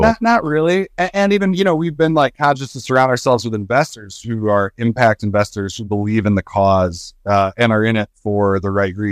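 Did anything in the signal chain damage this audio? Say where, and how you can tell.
Yes, hard clipping from overload at a gain or conversion stage, where the peaks exceeded what the converter or sample format could pass and were cut flat. The speech turns harsh and crackly on loud passages at 1.61–2.50 s (after "even you"), 2.96–3.34 s, 3.77–3.82 s, 5.02–5.08 s (between "who are" and "investors who believe in") and 7.35–7.66 s. The flattened tops add high harmonics, and the overdrive of about 2 to 6 dB makes the fuzz strongest at 5.02 s.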